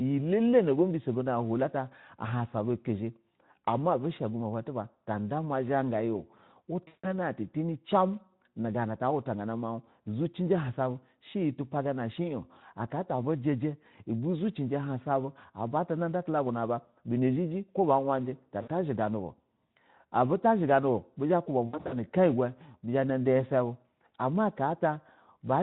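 Speech packets went missing at 6.87–7.14 s, just before "an ta tani cimu", at 18.62–18.69 s after "ko ba wariji ta", and in scattered runs of up to 60 ms at 21.67–21.93 s. This is VoIP packet loss concealed by the speech codec. The decoder stretches its last pitch into a fading, buzzy tone or coloured noise, and the speech stays weak briefly afterwards.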